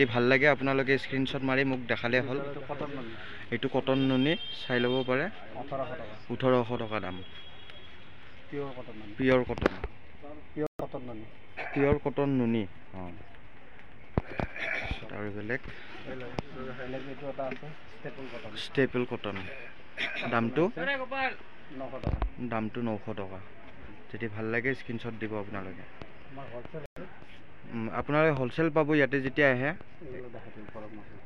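At 10.67 to 10.81 s and again at 26.86 to 26.98 s the sound cuts to silence, then resumes further along, likely a Bluetooth dropout from late packets.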